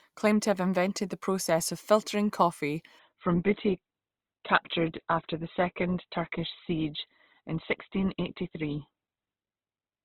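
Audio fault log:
2.99–10.04 s, adaptive stream at a lower bitrate: the connection slowed and the player switched to a lower-quality version of the stream, staying there to the end. From 2.99 s the speech abruptly loses its treble, with nothing above 4.1 kHz, and takes on a dull character with more audible codec artefacts. The switch happens with no gap or dropout. The sound fits an Opus stream falling from around 64 kbit/s to about 12 kbit/s.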